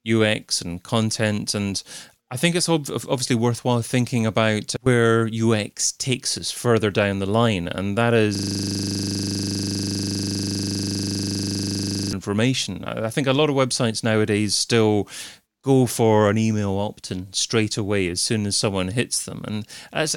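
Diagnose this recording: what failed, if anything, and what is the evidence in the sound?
The driver froze while hardware replayed its ring buffer, a system hang loop: from 8.35 to 12.13 s, one 40 ms slice buzzes at 25 Hz.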